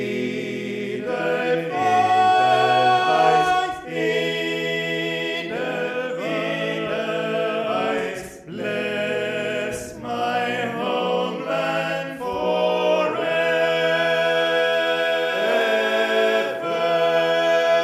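Nothing here trips the ear; the audio runs along without a single glitch, dropout or hiccup worth pointing to.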